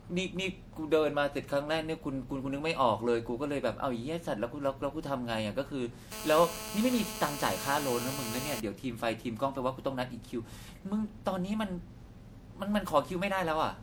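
From start to finish the speech sounds swirly, smeared and hollow, with blurred consonant attacks. That points to generation loss, likely from about five rounds of MP3 encoding at a bitrate near 96 kbit/s. On a spectrogram, patchy holes appear and content stops at about 20.7 kHz.

From 6.12 to 8.6 s a GSM phone buzz sits about 8 dB below the speech: a hard, raspy tone at 217 Hz, steady as during a call, from rectified radio bursts. Spectrograms show evenly spaced harmonic lines, and the waveform shows regular pulse spikes.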